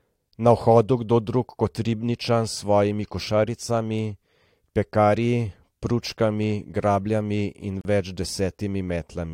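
At 7.81 s there's a gap at a join of encoded pieces, running to about 7.85 s. The speech just drops out for roughly 37 ms, with edges smeared by the codec, then picks up right where it left off. That's what you get when separately encoded chunks are stuck together untrimmed, so one encoder's end padding and the next one's start-up delay both survive as dead air.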